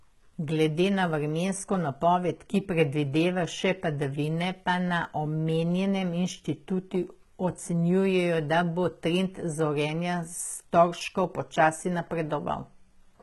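Throughout the speech the treble has a gritty, metallic edge and the s sounds are lispy. It is likely HE-AAC compression at a low bitrate: the upper band is rebuilt from copied lower bands, so its harmonics do not line up. A spectrogram shows repeated, smeared treble patterns and nothing above 11.8 kHz.

From 1.74 s, just after "na vremensko", to 11.64 s, a click recurs every 3.31 s, about four in all. These are clock drift buffer slips, likely from two clocks disagreeing by roughly 50 ppm, which fits a few samples dropped or repeated at each slip. The waveform shows tiny discontinuities.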